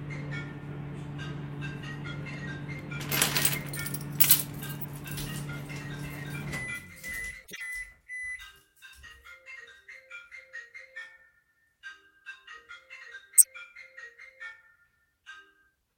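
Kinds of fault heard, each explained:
corrupt frame decoded: brief chirps and noise bursts at 4.79–4.86 s, 7.42–7.61 s and 13.38–13.46 s, the last far louder. Damaged compressed frames were decoded anyway, misread gains and codes scattering energy into wrong frequencies for three to seven frames each.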